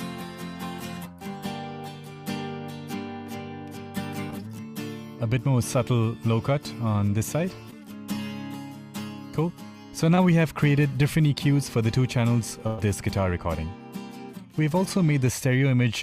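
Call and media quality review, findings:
Short concealed packet loss, 4.30–4.33 s: brief smear in the audio, about 13 ms filled in by the receiver's concealment, about 20 ms of original audio gone. Jitter buffer/decoder path; packet arrived late or never.

Short concealed packet loss, 7.71–7.73 s: short wobble, about 12 ms concealed, about 10 ms missing. Last sound extended by the decoder, then blended back.

Short concealed packet loss, 10.15–10.18 s: smear, about 20 ms concealed, about 20 ms missing. Same receive-side concealment.

Burst of packet loss, 12.67–12.79 s: held buzz or fading hiss in place of the audio, then a jump forward. The network path dropped several packets or delivered them too late, and the decoder held the last sound for 107 ms. About 110 ms of content was lost, with no silent stretch.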